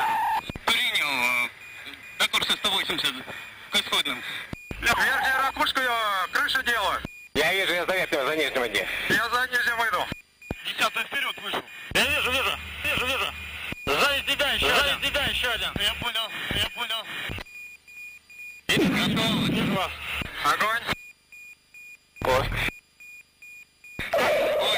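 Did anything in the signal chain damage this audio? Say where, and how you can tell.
Yes. From 12.85 s to 18.87 s everything is heard twice: a full-band copy at about the same level follows roughly 0.7 s behind, dry, and starts and stops abruptly. This is a doubled audio track, likely a second, slower capture path or a misaligned edit.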